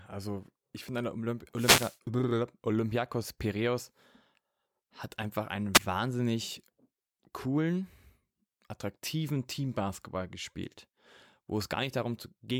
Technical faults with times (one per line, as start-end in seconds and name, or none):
1.55-1.98 wireless microphone noise hit
5.74-5.79 wireless microphone noise hit